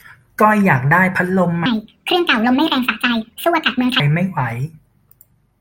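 A section at the wrong speed runs through this speech clip, most likely because that stretch was played back against the wrong clock. From 1.66 s to 4.0 s the audio runs 1.66 times faster than it was recorded, so speed and pitch jump together at that point: the voice becomes hurried and sharply higher, raised by roughly ten semitones, and it drops back abruptly to its natural rate and pitch at 4.0 s.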